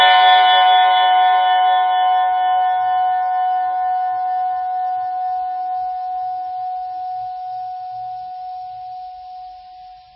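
Heavy MP3 compression runs through the whole music clip. Nothing is heard above 5.5 kHz, so the treble sounds dull. Weak frequency lines flicker on and off, giving a watery, swirly texture. This likely comes from starved bitrate, roughly 15 kbps.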